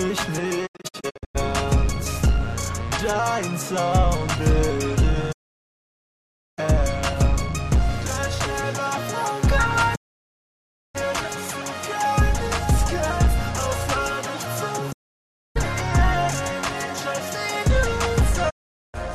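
Right at 0.65 s there's a digital broadcast dropout that arrives as a cluster of short holes spread across to 1.37 s, none longer than about 96 ms. Then come clean muted gaps at 5.31–6.60 s, 9.94–10.97 s, 14.91–15.57 s and 18.49–18.96 s. Each time the receiver stops getting good frames and mutes, fading out and back over about 20 ms, so whatever was broadcast during those gaps is simply gone.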